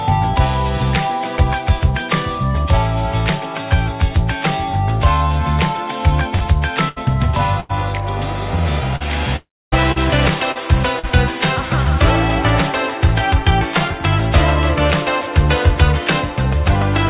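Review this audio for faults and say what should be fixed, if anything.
Bursts of packet loss at 6.36–6.44 s, 6.89–6.99 s and 7.60–7.72 s: several consecutive packets, about 40 to 80 ms of audio, failed to arrive. The receiver stretched the last sound over 47, 74 and 89 ms while fading it, giving a held buzz or hiss before the audio skips ahead.

Short concealed packet loss at 8.96–9.03 s, 9.92–9.99 s, 10.52–10.58 s and 10.99–11.06 s: roughly 40 ms went missing each time. The decoder patched each hole by extending the previous sound for 34 to 42 ms, heard as a brief smear or wobble.

Long network dropout from 9.36 to 9.75 s: about 360 ms of audio never arrived, likely a stall on the network path. The receiver extended the last sound, letting it fade, and about 260 ms of that stretch ends in silence before the audio resumes further on.

These losses all come from the transport. The narrowband sound with nothing above 4 kHz is just the call codec. 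Forward error correction or redundant packets, a larger adaptive jitter buffer, and a more stable network link should prevent them.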